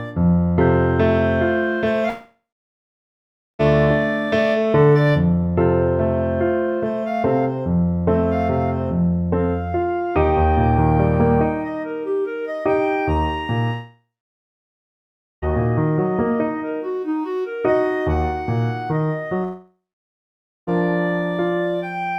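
The audio breaks up three times, at 2.09 to 3.61 s, 13.73 to 15.44 s and 19.44 to 20.69 s, each a long network dropout, likely from the stream stalling. In each gap the last sound smears into a fading buzz for roughly a third of a second, then roughly a second of silence follows before the audio resumes further on. Unlike brief packet-loss glitches, these gaps run over a second and the lost material never returns.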